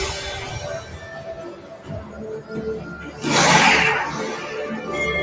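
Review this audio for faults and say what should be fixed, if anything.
A noise suppressor built for speech was left running on this non-speech audio, a case of noise suppressor applied to music or sounds. It treats steady tones, ambience and reverb as noise and pulls them down, so sustained parts and tails sink while onsets pass. Across the clip the level swings by roughly 15 dB as the suppressor acts, so the sound pumps, flutters or thins. The fix is to turn off speech noise suppression whenever the call carries music or general sound.

In two stretches the suppressor took the material for noise and reduced it further than the rest: sound cut by the noise suppressor from 0.81 to 1.32 s, dropping by up to about 6 dB, and from 1.54 to 2.19 s, dropping by up to about 8 dB. Each stretch is roughly half a second of affected sound where level sags or decays are cut short, within a band that holds nothing above 8 kHz from the call's microphone path. 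Bypassing the suppressor for non-speech content prevents these dips.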